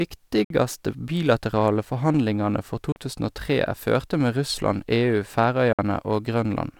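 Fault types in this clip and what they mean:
Bluetooth dropout: the speech cuts to silence three times, about 56 ms at 0.44 s, 37 ms at 2.92 s and 56 ms at 5.73 s. Each time it picks up further along, as if the talker kept going, and the first gap lands right before "bilaterale forhandlingane". Gaps of that size fit two or three lost packets on a wireless link, so the likely cause is audio arriving too late to the headphones and being dropped.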